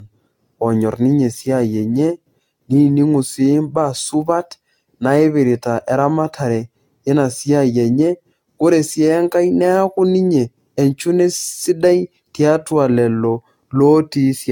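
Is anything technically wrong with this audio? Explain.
Yes. Generation loss runs through the whole speech clip, and the likely cause is repeated lossy encoding, which fits AAC at about 96 kbit/s applied around ten times over. Each decode and re-encode quantises the signal again on a shifted frame grid, so the errors and spectral gaps stack up. The voice sounds swirly, hollow and smeared, consonant onsets are blurred, and nothing remains above 17 kHz.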